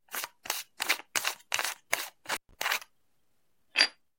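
At about 2.30 s the sound drops out abruptly, with a burst of crackle as it goes and again as it returns near 2.54 s. In between, the signal is gone for roughly 125 ms, leaving a faint hiss. This is an intermittent contact: a loose plug or cable briefly lost its connection, and the crackle comes from the contact scraping open and closed at each edge.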